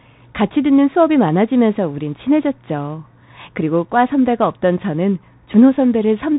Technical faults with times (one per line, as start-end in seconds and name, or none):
0.00-6.38 Bluetooth CVSD headset codec